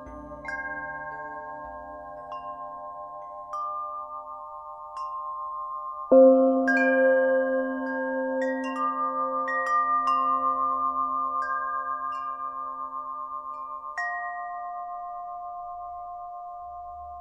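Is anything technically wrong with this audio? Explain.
Yes. An adaptive stream at a lower bitrate takes over at 14.49 s and runs to the end of the clip at 17.20 s. When the connection slowed, the player switched without a gap to a leaner encoding of the same audio. The treble above a few kHz turns synthetic and hollow, and compression artefacts thicken. The quality change is abrupt, and the thinner, swishier top end points to a drop from roughly 96 kbit/s AAC to around 32 kbit/s HE-AAC.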